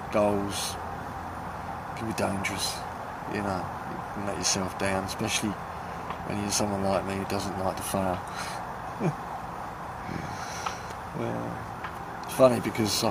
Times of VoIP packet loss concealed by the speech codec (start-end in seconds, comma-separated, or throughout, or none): none